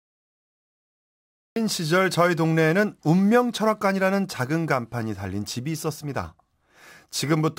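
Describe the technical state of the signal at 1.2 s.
At 1.2 s there is nothing but dead, flat digital silence. This is a cut-off start: the audio is empty from 0 s to 1.56 s, and the speech only begins abruptly at 1.56 s, partway into a sound, with no natural attack or fade-in. The recording or stream evidently began late.

The clip also carries sample clock jitter throughout, but it is inaudible at 1.2 s because there is no signal for it to distort. Once the speech begins, the converter's unsteady clock, wobbling by something like 5 microseconds, shifts each sample's timing slightly, adding a hiss-like roughness roughly 30 dB below the speech. That roughness grows on loud, bright sounds.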